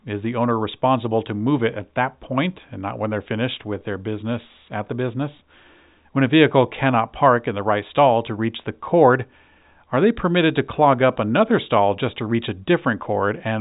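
No technical faults are audible anywhere in this speech recording.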